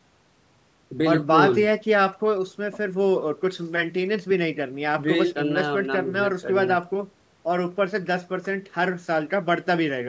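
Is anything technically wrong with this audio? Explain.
No, this speech has been through a call's microphone processing, which trims the lowest bass and leaves nothing above 8 kHz, and that is normal for a call rather than a fault.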